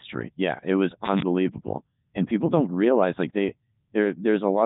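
Throughout, a Codec 2 vocoder rebuilds the speech from sine waves, which fits its 3.2 kbit/s mode, leaving it heavily robotic, buzzy and empty above 3.8 kHz.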